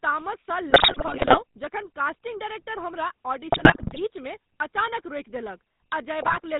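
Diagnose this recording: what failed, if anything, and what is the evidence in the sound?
The codec stage carries a GSM full-rate codec across the whole clip, and its damage is plainly audible. The speech has a buzzy, gravelly roughness with nothing above 4 kHz, which fits a 13 kbps full-rate stream. The coder models the vocal tract and excites it with a sparse, regularly spaced pulse train, so the voicing takes on a grainy texture. That buzz, rather than smeared or swirly highs, separates it from a simple low-pass or a perceptual music codec.

On the radio link, GSM bit errors hit the speech decoder in three bursts: 0.70 to 1.40 s, 3.52 to 4.00 s just after "कास्टिंग डायरेक्टर हमरा", and 6.22 to 6.40 s. The sound there turns to squawks, pops and gargling, which points to several percent of bits flipped. Corrupted filter, pitch and gain parameters distort each affected frame. Packet loss would instead leave gaps or smoothed repeats, not this garbled noise.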